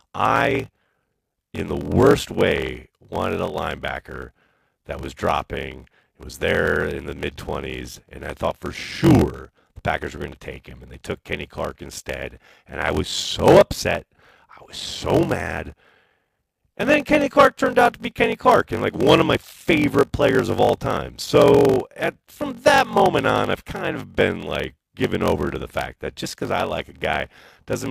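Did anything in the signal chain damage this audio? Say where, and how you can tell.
Yes, at the driver or buffer stage: a block size mismatch (padded) runs through the whole recording. A steady 46.9 Hz buzz, fitting a 1024-sample read buffer, accompanies the speech, which plays at 0.861 times normal speed with its timbre intact. A sample-rate mismatch would lower the pitch, and random underruns would not buzz at a fixed rate.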